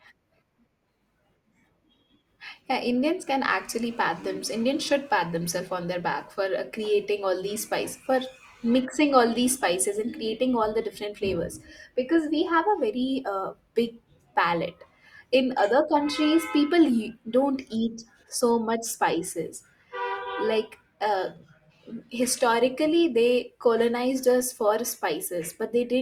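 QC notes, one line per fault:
5.48 s, corrupt frame decoded: between "should pat" and "on their back", a brief squeak-like blip peaking around -30 dBFS. Damaged bits were decoded as if valid, so misread gains and codes put energy at wrong frequencies, which points to a couple of bad frames.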